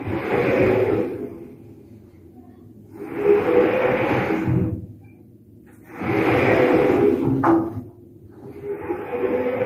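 A noise suppressor built for speech runs across the whole clip, applied to sounds it was never meant to handle. It reads steady tones, ambience and decays as noise and pulls them down. The gain keeps shifting, with the loss swinging by around 10 dB. Sharp onsets get through. Sustained parts sag. The result is a pumping, uneven texture with thinned-out tails.

In three places, sound is cut by the noise suppressor more heavily. From 1.28 to 3.0 s, about a second and a half of sound sinks, by about 8 dB at the deepest. From 4.85 to 5.93 s, roughly a second is pushed down again, by about 8 dB. From 7.85 to 9.07 s, the same happens once more. Held and fading sounds suffer most in each stretch. Their decays are clipped short while sudden hits stay present.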